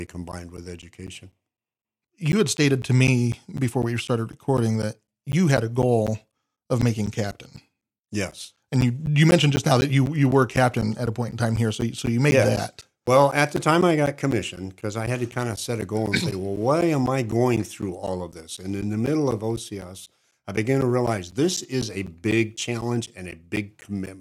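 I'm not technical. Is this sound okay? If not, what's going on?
No. From about 0.07 s to 24.07 s, the speech is broken by a steady ticking, four times a second, about a hundred ticks in all. Each tick is a tiny gap of roughly a hundredth of a second where the sound drops to silence. These are periodic USB or driver dropouts: something on the computer briefly blocked the USB connection or audio driver on a fixed schedule, so small pieces of audio were lost.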